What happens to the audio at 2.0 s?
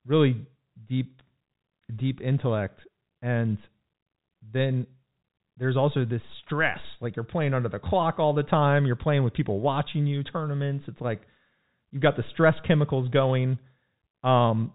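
Nothing goes wrong at 2.0 s: the speech there comes through intact, carried on its ordinary telephone-band G.711 coding with no break, click or distortion.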